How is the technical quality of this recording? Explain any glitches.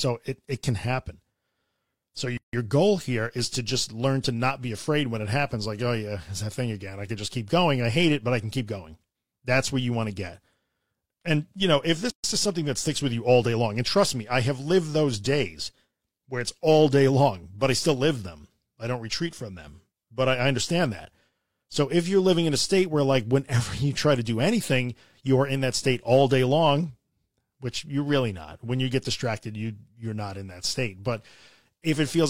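The speech has two gaps at joins of encoded pieces. The pieces were encoded separately and joined untrimmed, so each join keeps encoder start-up delay and last-frame padding as silence. At 2.37–2.53 s (about 159 ms, just before "goal here is to") and 12.10–12.24 s (about 137 ms, between "you know if" and "is something that sticks"), the sound cuts out with smeared edges, then resumes where it stopped.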